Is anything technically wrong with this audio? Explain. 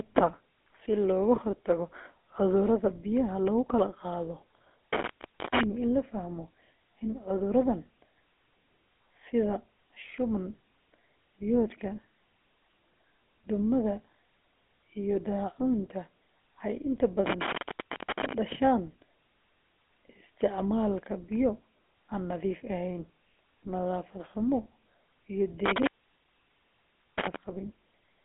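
Yes, two faults are audible.

Throughout the speech, the GSM full-rate codec is clearly heard. The sound is band-limited to about 250 Hz to 3.5 kHz, with nothing above 3.8 kHz. The codec models the vocal tract and drives it with a coarse pulse excitation, which fits a 13 kbps full-rate stream. This gives the speech a gravelly, buzzy roughness.

From 4.93 s to 5.63 s, an intermittent contact breaks the signal. A loose connection opens, and the sound drops out for about 0.48 s with crackle at each edge as the contact makes and breaks. Faint residual noise remains during the gap.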